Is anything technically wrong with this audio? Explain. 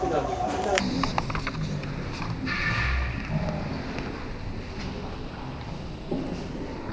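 Yes. From 0.80 s to the end, the audio has a wrong sample rate: it runs at about 0.36 times its proper speed and sits about 17.6 semitones low, which fits 44.1 kHz material played at 16 kHz. Unlike a pitch shift or time-stretch, tempo and pitch drop together.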